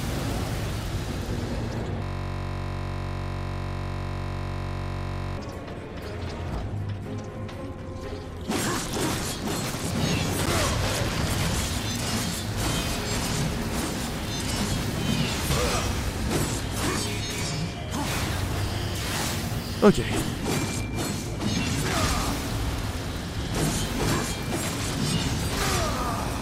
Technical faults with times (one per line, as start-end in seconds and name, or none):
2.03-5.37 system hang loop